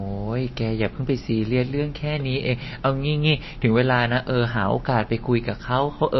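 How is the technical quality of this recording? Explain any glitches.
The technical quality is poor. The speech carries plainly audible compression damage from start to finish, most likely from MP3 compression at a low bitrate. Nothing reaches above 5.8 kHz, and the sound has a watery, swirling texture. That points to a rate somewhere near 27 kbps. With so few bits, the encoder cuts the treble at a fixed point and drops weak frequency components that switch in and out from frame to frame. A plain low-pass filter would dull the top end just as much, but it would not add this shifting, chirpy smear on s sounds and attacks.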